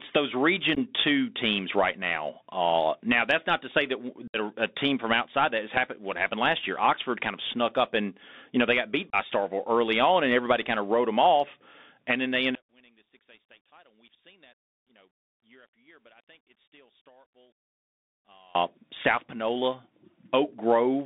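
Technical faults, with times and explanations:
Throughout: Bluetooth CVSD headset codec. The sound is confined to a narrow 200 Hz to 3.7 kHz band, with a granular hiss underneath and scratchy, gritty sibilance. The one-bit delta coder's adaptive step cannot keep up with loud, high-frequency content, which causes the distortion.
0.75–0.78 s, 4.28–4.36 s and 9.10–9.15 s: unconcealed Bluetooth headset packet loss. These are abrupt holes of about 15, 64 and 30 ms, with a brief dip in level afterwards. Runs of short headset voice packets went missing and were replaced by silence or an idle pattern rather than filled in.
12.55–18.55 s: one channel inverted. For six seconds the speech drops by about 32 dB, leaving only a faint residue. This is likely because one stereo channel has reversed polarity, so the centred content both channels share cancels when they are summed to mono.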